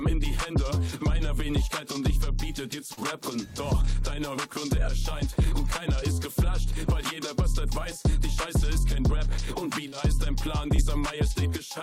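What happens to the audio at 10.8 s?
At 10.76–10.80 s there is short concealed packet loss: about 20 ms never arrived, and the receiver extrapolated the preceding sound, leaving a brief smear rather than a dropout's silent gap.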